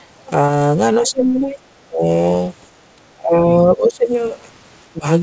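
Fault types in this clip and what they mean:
Short concealed packet loss: About 20 ms of speech near 0.46 s never reached the decoder, and the receiver patched the hole by extending the sound just before it and then blending back into the real signal. It comes through as a tiny smear or wobble. Unlike a plain dropout, there is no silent gap or hard click, because the missing piece is filled with a continuation rather than left empty.
Speech suppressed in double talk: The speech level sinks several times, from 1.0 to 1.58 s, 1.87 to 2.08 s, 2.96 to 4.08 s and briefly near 4.93 s. It drops by roughly 15 to 20 dB at its deepest, turning thinner or breaking into pieces. The likely cause is an echo canceller ducking this talker while the far side spoke. Unlike packet loss, these dips span over a hundred milliseconds and lower the level instead of patching a gap.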